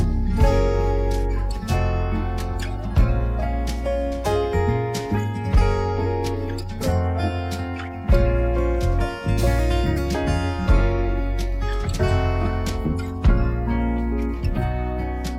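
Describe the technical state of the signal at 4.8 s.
At 4.8 s the signal is intact, with no dropout, distortion or other fault to be heard at that point.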